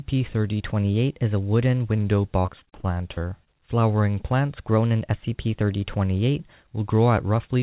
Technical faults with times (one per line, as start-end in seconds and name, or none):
0.61-1.98 drift correction step
2.40-3.48 repeated packet loss (robotic sound)
4.68-6.53 drift correction step